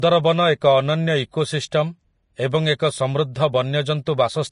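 A speech clip with Vorbis compression damage the whole way through: nothing above about 10.6 kHz, a grainy hiss where the fine treble detail should be, and softened consonant edges. It's likely a low-bitrate Vorbis encode, and the artefacts fit something around 33 kbps.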